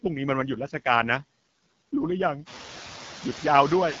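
From the start, the speech carries noise suppressor artifacts. The suppressor pulls what it takes for steady background noise down by only about 3 dB, frame by frame, so the noise still sits under the speech. It dips a little between phrases and swells back under them. After the room noise jumps by about 13 dB at roughly two and a half seconds, it ends up about 14 dB below the speech.

The AMR wideband (HD Voice) codec runs across the whole clip, and its damage is plainly audible. The speech has that rough, raspy edge you get when a pulse-driven vocal tract model is starved of bits, which fits one of the lowest AMR-WB modes, around 8.85 kbit/s. Nothing comes through above 7.5 kHz, so the top end sounds boxed in.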